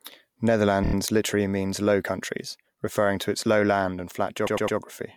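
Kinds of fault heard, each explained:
Repeated frames: The decoder plays one slice of compressed audio several times, so the sound stutters. From 0.82 s, a 26 ms block, which fits a single frame, plays four extra times. From 4.46 s, a 105 ms block plays three extra times. The clip gains about 0.42 s.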